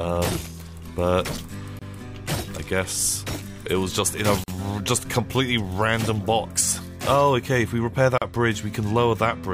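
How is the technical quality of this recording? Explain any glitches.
Three brief dropouts interrupt the recording. Each is a gap at a join of encoded pieces: separately encoded segments were spliced without trimming, so encoder start delay and final-frame padding leave silence. The silences are at 1.79 s (27 ms), 4.44 s (43 ms) and 8.18 s (38 ms), each with smeared edges, after which the sound resumes where it stopped.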